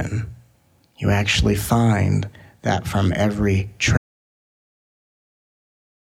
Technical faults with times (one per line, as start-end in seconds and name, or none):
3.97-6.12 audio dropout to silence